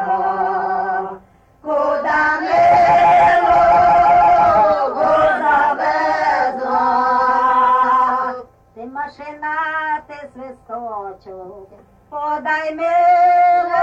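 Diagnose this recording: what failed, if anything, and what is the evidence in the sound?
Nothing failed, and there is no evidence of a fault anywhere in the sound.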